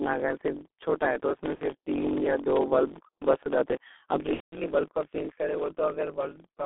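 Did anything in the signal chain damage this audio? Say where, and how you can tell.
Yes. At the driver or buffer stage there is a block size mismatch (truncated). A steady buzz near 46 Hz runs throughout, and the speech plays about 1.07 times too fast at normal pitch. That fits 1024-sample blocks losing their tails. Resampling would shift pitch too.

At the codec stage the G.723.1 codec has done heavy damage. At about 6.3 kbit/s the sound is confined to roughly 250 Hz to 3.6 kHz and is muffled and hoarse, with smeared consonants. A plain band-limit would not add that hoarseness.

In the network, VoIP packet loss concealed by the speech codec appears from 1.55 to 1.64 s and from 4.34 to 4.57 s. Each gap starts with a stretched, fading sound extrapolated from the preceding speech, and the longer one is then muted from its third lost frame, so these are not plain dropouts. About 60 ms and 180 ms of audio were lost.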